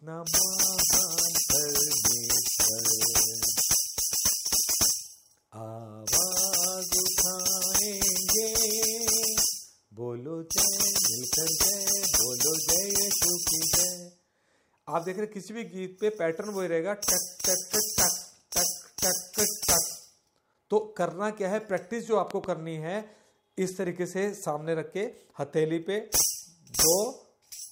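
A loud pop at 22.31 to 22.46 s: two sharp thumps, about 10 dB above the sound, likely from a voltage pulse such as a plug or switch.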